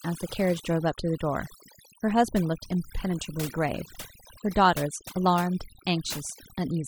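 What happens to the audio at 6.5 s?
At 6.5 s you're hearing overdone noise removal, present through the whole clip: bands near the noise floor get gated out, taking quiet parts of the voice with them and leaving twinkly near-silence.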